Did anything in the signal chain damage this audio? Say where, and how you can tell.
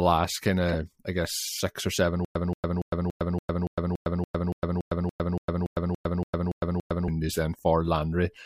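Yes. From 0.67 to 0.75 s a short glitch of misplaced energy cuts through the speech. That is a corrupt frame decoded at the codec stage. Damaged bits in a few compressed frames were played anyway, so misread gains and codes put energy at wrong frequencies.

From 2.25 to 7.08 s the sound becomes a stutter with silent gaps. A 178 ms fragment repeats 17 times, every 285 ms, with 106 ms of digital silence between. The likely cause is a stalled stream or playback buffer replaying its last fragment, then running empty. The intended audio is lost.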